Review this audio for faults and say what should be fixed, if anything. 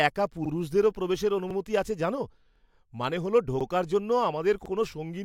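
The speech has overlapping chunks. A 50 ms piece repeats at 0.46–0.51, 1.51–1.56, 2.56–2.61, 3.61–3.66 and 4.66–4.71 s. Each 1 s chunk starts before the last ends, so every join stutters. Start each chunk exactly where the previous one ended.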